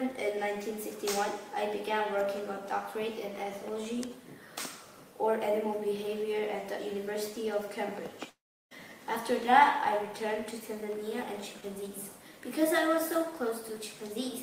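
At 8.29 to 8.73 s the sound breaks off into a fading buzz, then about 0.35 s of near-silence, and resumes with roughly 0.42 s missing, likely a long network dropout. A spectrogram shows smeared, decaying bands, then an empty gap; the waveform collapses flat.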